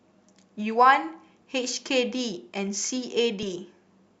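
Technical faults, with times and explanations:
3.43–3.45 s, overlap between stream segments: overlapping segment timings remove about 25 ms of speech, so the waveform jumps, causing a short click or skip.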